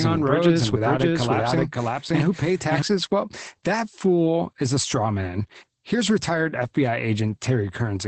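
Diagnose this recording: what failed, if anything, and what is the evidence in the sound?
The whole clip is muffled and slightly hoarse, with a faintly robotic edge to the speech and nothing above 8.4 kHz. This is Opus voice compression damage at the codec stage. The linear-prediction coder has cut the band to wideband and coded the excitation coarsely, and the level of damage fits a bitrate around 12 kbps in SILK mode with 20 ms frames. The coarse excitation is what causes the hoarse, buzzy texture.

From the start of the clip until 2.82 s, the speech is heard twice. A second copy, about as loud as the first and dry with no room colour, trails the original by about half a second. It is already running when the clip begins and then cuts off abruptly at 2.82 s. This is a doubled audio track, likely from the same audio being captured a second time through a slower path, or from an edit that left two copies out of step.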